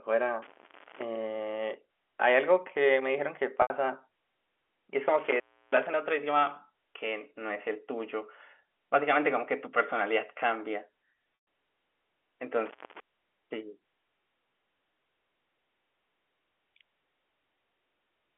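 From 0.42 to 1.02 s there is an intermittent contact: a loose connection opens and the audio drops out for about 0.45 s, with crackle where the circuit breaks and remakes and faint hiss in between. The same fault returns at 5.19 to 5.94 s, with a gap of about 0.33 s, and at 12.66 to 13.00 s, with a gap of about 0.25 s. The crackle at both edges is the tell. Network dropouts start and end smoothly.

At 3.62 to 3.70 s, packet loss with pitch repetition leaves an 80 ms hole. The receiver fills it by repeating the last pitch period, which gives a brief held, buzzy tone that fades to silence before speech returns through a short cross-fade. A 120 ms loss at 11.35 to 11.47 s behaves the same way but with a longer silent tail. Unlike the contact faults, these have no crackle, and the gap begins with a smooth sustained tone. The narrow 300 to 3400 Hz telephone band of the G.711 line is audible throughout.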